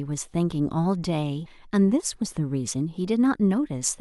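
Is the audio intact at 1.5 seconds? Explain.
No, right around 1.45 s there are compressed frames skipped: about half a second of speech just vanishes, and the audio jumps ahead at the join.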